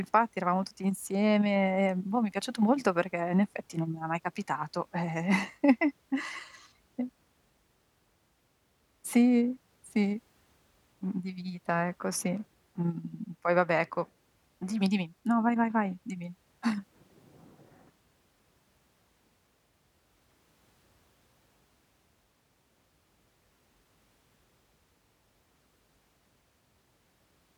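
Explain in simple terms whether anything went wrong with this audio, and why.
Nothing went wrong with the recording: the speech comes through steady and intact, with no audible technical problems anywhere in the clip.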